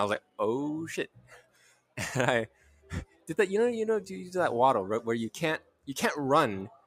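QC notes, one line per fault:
Throughout: noise suppressor applied to music or sounds. A speech-oriented suppressor is treating steady tones, ambience and reverb as noise. Its gain swings by roughly 15 dB. Sudden onsets pass mostly intact, but held sounds and decays get pulled down. The result is an uneven, pumping level. The level rises on each attack and then sags as the sound sustains.
0.2–0.39 s, 1.07–1.98 s, 2.48–3.31 s, 5.59–5.89 s, 6.69 s to the end: sound cut by the noise suppressor. In each span the suppressor judged the material as noise and cut it harder than the rest. The deepest drops are about 17, 18, 14, 18 and 13 dB in turn. The longest dip runs close to a second, around 1.1 to 2.0 s. Sustained and fading sound sinks, and tails end early.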